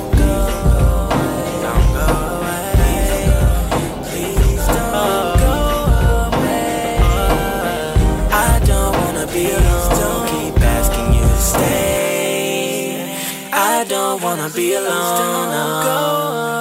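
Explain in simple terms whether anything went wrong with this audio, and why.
Sample clock jitter runs throughout. The converter's timing wobbles by a few microseconds, so samples land slightly off, adding a hiss that grows on loud, bright moments.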